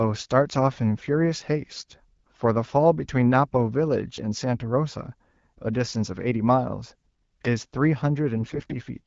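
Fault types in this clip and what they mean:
AMR bit errors: corrupted low-priority bits in the coded frames misplace excitation pulses, making the speech briefly hoarse and gargly at 1.75 to 1.92 s and 8.38 to 8.75 s.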